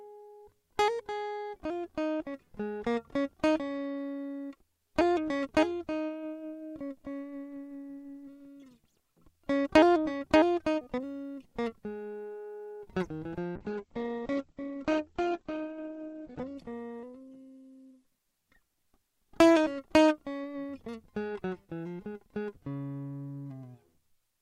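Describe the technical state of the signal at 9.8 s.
At 9.8 s the music plays through intact, with no dropout, click, distortion or other technical fault audible at that moment.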